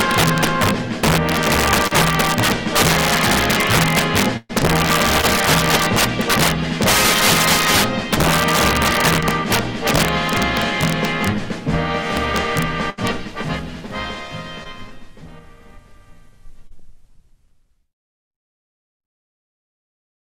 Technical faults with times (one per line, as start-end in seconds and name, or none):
0.00-20.34 integer overflow
1.87-1.93 short concealed packet loss
4.37-4.51 burst of packet loss
5.21-5.24 short concealed packet loss
9.20-9.24 short concealed packet loss
12.90-13.00 burst of packet loss
14.64-14.67 short concealed packet loss
16.67-16.72 short concealed packet loss